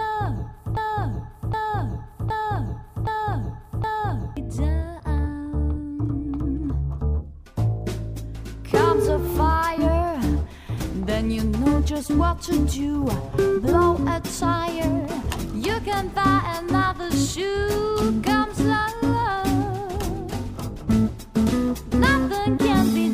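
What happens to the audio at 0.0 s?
From the very first instant the audio is already stuck in a broken-record loop: a fragment of about 0.77 s plays back to back, exactly the same each time, five times over, until the loop releases at 4.37 s. The likely cause is a player, encoder or stream that stalled and kept re-sending the last chunk it held, so whatever should have sounded during those seconds is simply missing.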